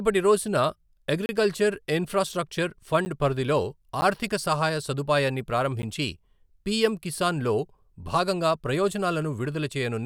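At 1.26 to 1.29 s, the speech drops out for 30 ms: a block of digital silence. Shorter 10 ms holes follow at 3.05, 4.01 and 5.82 s. The sound cuts out and back with no fade. The 10 ms holes are short enough to sound like ticks.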